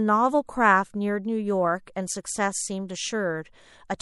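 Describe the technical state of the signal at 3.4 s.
At 3.4 s the speech carries MP3 compression damage, present for the whole clip rather than at that instant alone. The likely cause is an encoder short of bits, which fits a rate of about 64 kbps. With so little data it drops quieter frequency detail that flickers in and out between frames. The result is plainly audible: a watery, swirling texture, with smeared consonant onsets and metallic sibilance.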